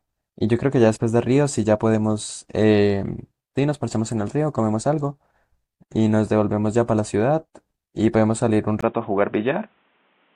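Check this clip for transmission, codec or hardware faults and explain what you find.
One fault appears near the end of the clip. An input switched to a poorer device at 8.81 s, and the change lasts to the end at 10.35 s. The likely cause is the system moving capture to a different microphone or a headset's call profile partway through. That device passes a narrower band, so nothing above 3.8 kHz survives and the speech turns dull and boxy. A 20 ms silence marks the switch. A faint new background noise sits well below the speech, with no obvious jump in loudness.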